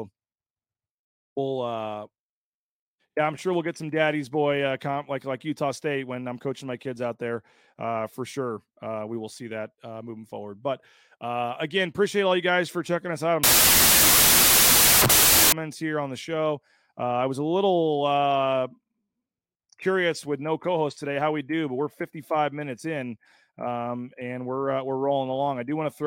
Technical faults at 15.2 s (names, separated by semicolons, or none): wrong sample width